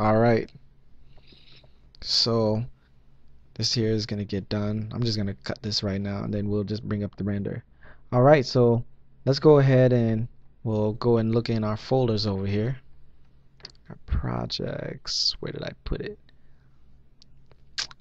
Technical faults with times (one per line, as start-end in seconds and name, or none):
6.27-10.73 de-emphasis applied wrongly